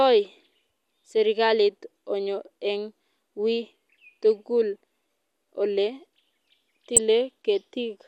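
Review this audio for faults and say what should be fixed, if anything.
There's DAB burbling in this speech clip, first from 1.85 to 1.97 s and again briefly from 6.96 to 6.98 s. Weak reception lets a small fraction of a percent of bit errors slip past the error correction into the MP2 data. Corrupted samples put short blips of noise in single sub-bands, and corrupted scale factors make sub-bands jump in level for up to a frame, giving burbling over the speech. To prevent it, improve the antenna or signal strength at the receiver.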